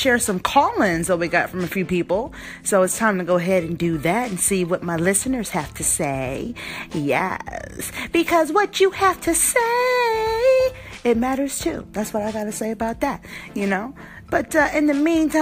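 At 10.94 s there is a repeated buffer. A tiny slice of about 2.7 ms plays three times, fitting a 128-sample buffer replayed when new audio arrived late. It sounds like a brief click or buzz.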